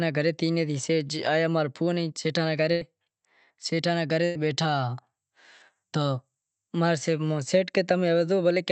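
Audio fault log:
2.71–2.83 s and 4.25–4.37 s, burst of packet loss: in each, about 100 ms of the call's speech never arrived in time. The receiver stretched the last sound and faded it, giving a held buzz on a voiced sound or a fading hiss otherwise, before resuming further along with that stretch gone.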